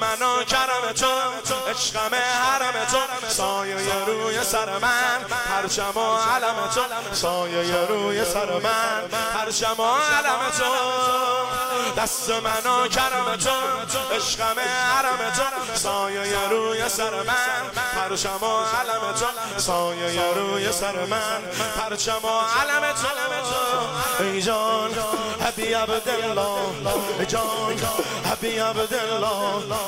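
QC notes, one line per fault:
25.48–27.34 s, train of clicks: about fifteen near-identical clicks at a steady 7 per second, peaking roughly as loud as the surrounding sound, likely from interference or a faulty connection injecting pulses. The waveform shows evenly spaced spikes, and the spectrogram shows thin broadband vertical lines.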